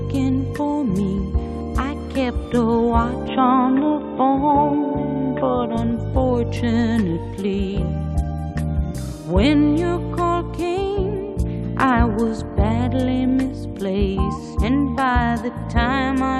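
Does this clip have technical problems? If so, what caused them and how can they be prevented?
Yes. From 3.28 to 5.77 s the sound turns dull and boxy, with nothing above 3.8 kHz, and then clears again. This is likely an input switched to a poorer device, whose narrower band and different tone replace the original microphone with no gap and little level change. To prevent it, lock the recording input to one microphone and stop the system or headset from switching devices automatically during capture.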